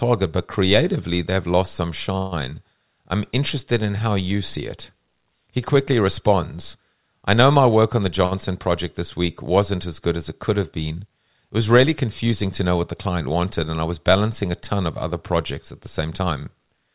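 At 2.18 s, just after "creatively they've lost some", the speech halts for about 0.16 s in what is likely a call audio freeze: packets held up in transit emptied the jitter buffer. The receiver filled 137 ms by extending the last sound as a fading buzz or hiss rather than falling silent. Speech then resumes exactly where it stopped, with nothing lost. What sets it apart from a simple late packet is the length and the decaying, synthetic fill.

At 8.26 s, just before "project this week wasn't", a short stall from a late packet occurs. One packet missed its slot, so the receiver held the current sound 55 ms too long, with a slight buzz or dip, until the packet arrived. No speech is missing. Unlike the freeze, it is brief and reads as one drawn-out sound rather than a fading gap.

From 16.01 to 16.92 s, after "other projects at the", a jitter buffer speed-up makes the speech run at about 113% speed with unchanged pitch. 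The buffer had built up surplus delay, so the receiver trimmed roughly 150 ms of pitch-period-sized pieces in quick succession. The result sounds hurried. Because the pitch stays put, it is not a resampling error.

Throughout, the audio has nothing above 4 kHz, which fits a G.711 A-law call path at 64 kbps.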